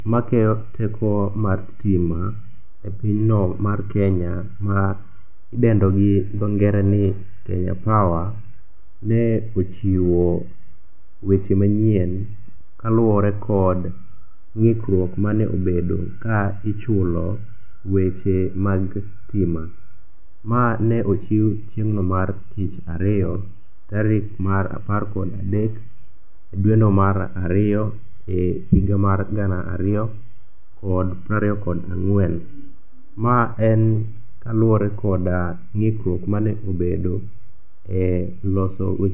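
No dropouts, clicks, distortion or other transmission faults are audible anywhere in this speech recording.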